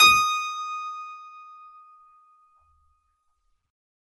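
Music, with MP3 compression damage running through the whole clip. Nothing sounds above about 11.5 kHz, so the treble is cut flat at that point. The damage is plainly audible. The texture sounds watery and swirly, because weak frequency components drop in and out from frame to frame. Sharp onsets sound smeared. The hard treble ceiling and plainly audible artefacts fit a low bitrate around 48 kbps, likely starving the encoder of bits.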